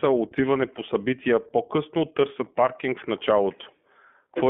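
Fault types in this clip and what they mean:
iLBC codec: a narrowband codec that codes each 20 ms frame independently. Here the speech sounds plainly rough and synthetic, which fits the 15.2 kbps mode. A spectrogram shows energy held between 200 Hz and 3.4 kHz.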